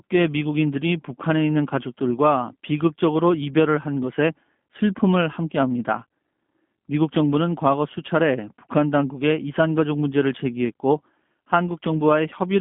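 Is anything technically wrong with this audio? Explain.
Yes. G.729 codec damage runs throughout the speech. The codec doesn't send the waveform. It rebuilds each 10 ms frame from a vocal tract filter, a pitch predictor and a few pulses per half-frame, at a rate that fits 8 kbit/s. The line band spans roughly 150 Hz to 3.5 kHz, so nothing above 3.5 kHz survives, which makes the sound muffled and telephone-like. The coarse pulse model plainly adds a rough, synthetic edge to the speech.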